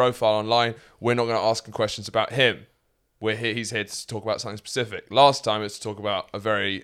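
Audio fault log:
Nothing to log here: I didn't hear a single fault anywhere in this speech recording.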